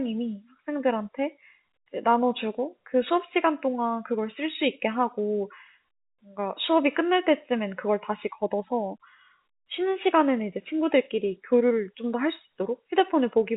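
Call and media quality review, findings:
No faults found: the speech sits inside the narrow telephone band of G.711 A-law coding at 64 kbps, with nothing above 4 kHz and only the faint level-following quantisation hiss that this coding leaves.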